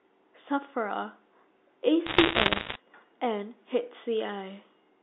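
From 2.06 to 2.76 s, sharp ticks and a scattered crackle sit over the speech, which itself stays intact beneath them. These are bit errors on a digital phone line: flipped bits, around 2 percent, each corrupt one G.711 sample, and sign or high-bit hits produce the loudest clicks.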